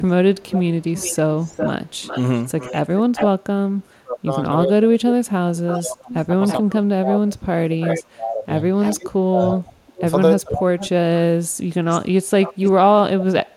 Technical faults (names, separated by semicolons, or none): echo leak; speech suppressed in double talk